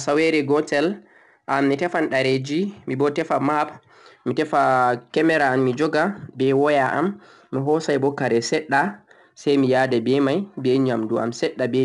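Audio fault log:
Throughout: 4-bit ADPCM compression. Each sample is coded as a coarse 4-bit step from a prediction, so a gritty hiss rises and falls with the speech level and is plainly audible. Content stops near 10.7 kHz, which fits a sample rate around 22 kHz.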